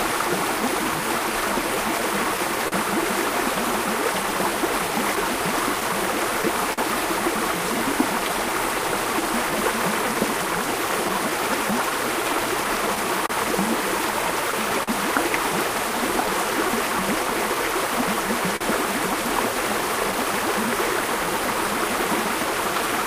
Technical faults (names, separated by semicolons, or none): clock drift between sender and receiver; repeated timing corrections; scattered short gaps